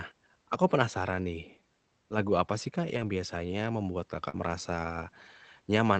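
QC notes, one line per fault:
2.89–3.07 s and 4.33–4.35 s, lost packet rebuilt from error correction: The first stretch lasts 100 ms, just before "biasanya membuat". The second lasts 20 ms. No gap is heard. The decoder played low-bitrate copies carried in the following packets, so these frames sound rougher and noisier.
4.29–4.35 s, short concealed packet loss: Right after "biasanya membuat", about 40 ms never arrived in time. The receiver filled 39 ms by extending the preceding sound, then blended back. The result is a brief smear or wobble, and a short consonant may disappear.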